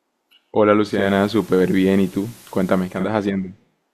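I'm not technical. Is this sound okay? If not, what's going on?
No. From 0.83 to 3.11 seconds there's digital radio blending to analogue: the receiver lost its digital signal and fades over about 0.4 seconds to the station's FM broadcast. A faint hiss rises and the volume shifts. Unlike ordinary interference, it then fades smoothly back to clean sound.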